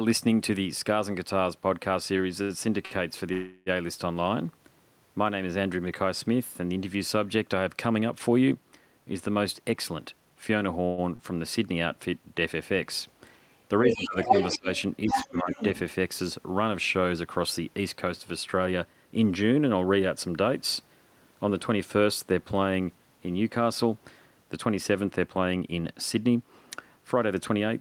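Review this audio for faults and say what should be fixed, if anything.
Repeated stalls (stutter) run from 2.17 to 2.94 s: three gaps, the longest 70 ms, filling about 133 ms (17% of the span) with stretched sound. Late packets emptied the jitter buffer repeatedly, so playback drags and stutters without losing audio. A deeper adaptive jitter buffer would prevent it.

A call audio freeze holds the sound from 3.33 to 3.69 s (336 ms) and again from 10.85 to 11.01 s (123 ms), each a fading continuation of the last sound that adds that much delay. The likely cause is packets held up in transit with an empty jitter buffer. Better network queuing (QoS) would prevent these freezes.

Jitter buffer speed-up occurs from 9.62 to 10.79 s at 111% (roughly 150 ms removed), 18.58 to 18.94 s at 110% (roughly 50 ms), and 25.58 to 27.69 s at 107% (roughly 150 ms). Pitch-period pieces were cut to shed excess buffered delay, so the audio sounds hurried. 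Steadier packet delivery would prevent the buffer overfilling.

A short stall from a late packet at 11.16 to 11.22 s stretches one sound by 34 ms. That packet missed its playout deadline, and the receiver held the previous sound until it arrived. Slightly more jitter buffer headroom would prevent it.

A second, other side's voice leaking through appears at 13.89 to 14.07 s and 15.10 to 15.79 s at about the speech level, at 14.23 to 14.59 s about 5 dB louder, and faintly at 14.78 s, about 20 dB down. This is likely loudspeaker echo the echo canceller left in the microphone signal. Better echo cancellation, or a headset, would prevent it.

Speech suppressed in double talk makes the talker dip by about 15 dB from 13.90 to 14.32 s, by as much as 30 dB from 14.51 to 14.68 s, and by about 15 dB from 15.09 to 15.58 s, overlapping the leaked voice. The echo canceller likely attenuated both sides while each was talking. 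A canceller with better double-talk detection would prevent it.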